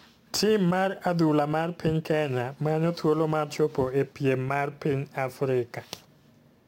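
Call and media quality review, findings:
Crude rate conversion, whole clip. Gritty, inharmonic fizz riding on the speech, strongest on loud and sibilant passages, error around 30 dB below signal. Probable component: resampler in capture or mixing path. Mechanism: samples dropped or repeated with no filtering, in a repeating pattern consistent with a 48 kHz to 44.1 kHz conversion, producing shifted, inharmonic copies of the speech.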